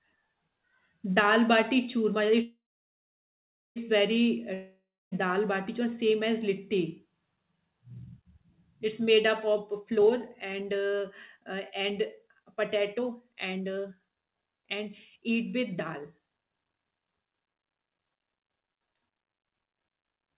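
It's a speech clip carried over a narrowband call path, with nothing above 4 kHz, which fits a G.711-style telephone codec. Right after "bati churma" at 2.42 s there's a call audio freeze lasting until 3.78 s. The last sound trails off into a fading buzz and then about 1.17 s of near-silence before the talk resumes with "very uh". Nothing is actually lost; it's just a 1.34 s gap pushed into the audio, likely from delayed packets draining the jitter buffer. Shortly after "very uh", from 4.54 to 5.13 s, comes a long network dropout. Again there's a fading tail, then about 0.27 s of silence, but this time roughly 0.58 s of the audio never reappears, likely because those packets never arrived at all. Then from "made up" at 9.52 s through 17.22 s there's a jitter buffer speed-up. The receiver keeps snipping out tiny pitch-period chunks to burn off the backlog, so the talking runs at about 117% speed with unchanged pitch and sounds rushed, shedding around one and a half seconds overall.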